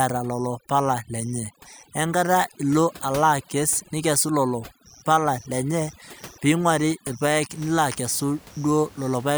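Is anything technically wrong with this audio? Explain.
Yes. Overdone noise removal runs from 0.0 to 7.5 s: a noise reducer set too aggressively pulls individual frequency bands down whenever they sit near its noise estimate, taking quiet speech detail with them, so the background collapses into twinkling specks. The room noise, about 23 dB below the speech, is simply part of the recording.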